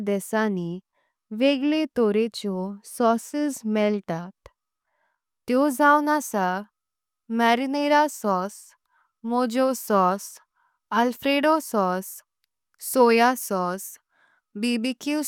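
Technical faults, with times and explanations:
No technical faults can be heard in this speech.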